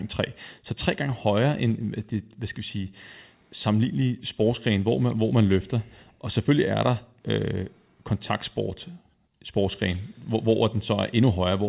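There are no technical faults to describe in time order, only the expected narrowband sound of a G.711 call path with nothing above 4 kHz.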